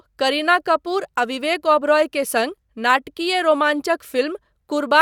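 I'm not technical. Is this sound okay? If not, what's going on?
Yes, nothing stood out as a problem when listening to this recording.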